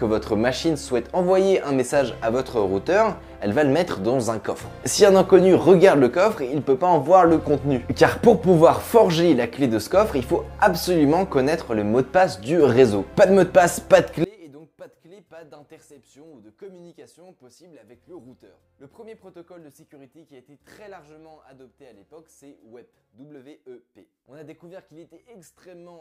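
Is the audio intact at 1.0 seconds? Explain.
Yes, the audio is intact at 1.0 s, with no dropout, click, distortion or other fault at that moment.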